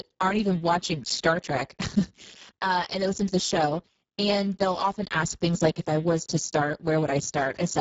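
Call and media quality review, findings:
Hoarse, noisy, buzzy-robotic speech throughout; Speex codec at a starved setting, which fits roughly 6 kbps. Sparse CELP excitation, nothing above 7.7 kHz.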